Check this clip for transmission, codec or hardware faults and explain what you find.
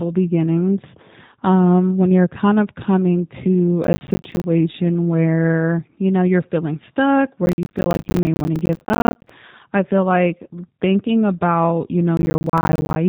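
The clip has two faults: a low-bitrate speech codec throughout, and three bursts of processor overload crackle.

G.729 codec, throughout: The speech is rebuilt from a vocal tract filter, a pitch predictor and a few pulses per frame rather than sent as a waveform. The result is a rough, slightly synthetic quality consistent with 8 kbit/s G.729A. The damage is plainly audible, and nothing above 3.8 kHz survives, so the sound is narrow and lacks sibilant air.

Processor overload crackle, at 3.84 to 4.44 s, 7.46 to 9.3 s and 12.17 to 12.96 s: The processor repeatedly fails to finish its audio buffers in time. The buffers appear to be around 10 ms each. Every missed deadline drops a short hard-edged gap of silence into the speech, and strings of these gaps produce gritty tearing. The first burst follows "kind of coming to". The second, the longest, runs from "know you're feeling stuck" to "i feel like thinking". 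The last follows "like thinking about you".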